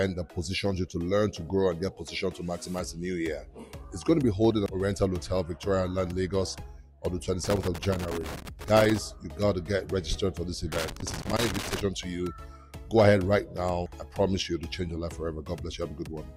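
Irregular scratchy crackle bursts from 7.44 to 8.98 s and from 10.72 to 11.81 s: loose connector crackle, a worn contact rapidly breaking and remaking, chopping the signal.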